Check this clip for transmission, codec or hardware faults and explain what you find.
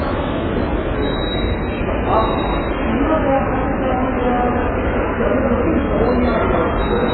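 One fault runs through the whole clip: AAC compression damage. The likely cause is an AAC-LC encoder starved of bits, consistent with roughly 8 kbps. It cut everything above 4.5 kHz and coarsely quantised what remained, leaving the sound dull, smeared and heavily degraded, with a fizzy, warbling texture on sustained sounds.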